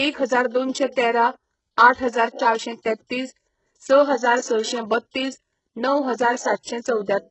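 Speech, carrying heavy HE-AAC compression damage throughout: the treble is rebuilt rather than real, copied up from lower bands, so sibilants sound gritty and metallic, with nothing above 8 kHz. That points to a very low bitrate, likely around 8 kbps.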